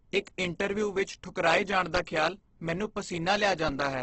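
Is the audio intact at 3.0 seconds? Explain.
No. At 3.0 s, as throughout, the speech sounds rough and grainy, with nothing above 8.2 kHz, which points to heavy Opus compression, likely at a very low bitrate around 12 kbps. Starved bands get filled with noise instead of left empty, so it sounds grainy rather than swirly like MP3.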